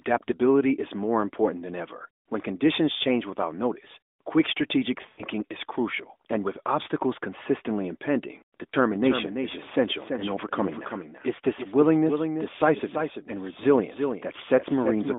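Lost AMR speech frames occur at 5.10 to 5.24 s, between "without notice quick strategic" and "is crucial and with", and again at 8.70 s after "with obstacles consistently impending". In both places the narrowband decoder fills corrupted frames by reusing the last good pitch and spectral settings with falling gain. The first gap of about 80 ms, consistent with four lost frames, sounds drawn out and fading. The second, a single 20 ms frame, is a brief dip.

A doubled audio track begins at 8.93 s, just after "with obstacles consistently impending", and lasts to the end. A second full-band copy, roughly 10 dB quieter and about a third of a second late, enters abruptly with no room colour, likely from a slower parallel capture path.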